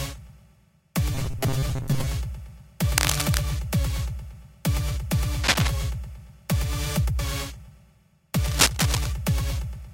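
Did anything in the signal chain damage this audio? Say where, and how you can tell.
Yes. Robotic sound from repeated short buffers runs from 1.15 to 2.07 s, at the driver or buffer stage. A rigid, metallic 134 Hz buzz runs through the sound, which fits a block of about 7.5 ms being replayed about half the time, likely because fresh audio arrived too slowly.

Cable scratch noise appears at 2.97 to 3.42 s, 5.43 to 5.73 s and 8.41 to 9.07 s, in the analogue wiring. Uneven bursts of scratching, roughly as loud as the sound itself, sit on top, likely from a worn cable or connector whose contact resistance jumped as it moved.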